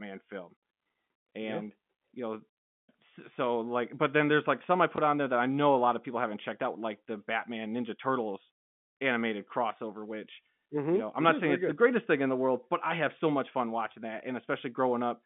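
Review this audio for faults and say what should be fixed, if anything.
At 4.96 to 4.98 s there's a small blip from packet loss with the last packet repeated. About 20 ms of audio went missing, which fits a single lost packet, and the receiver just replayed the previous chunk in its place over the G.711 telephone line. Using proper packet loss concealment on the receiving end would smooth over a gap like this.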